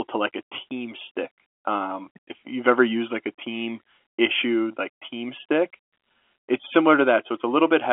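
There are no technical faults to describe, since the speech simply carries the narrow telephone band of G.711 coding, with nothing above 3.6 kHz.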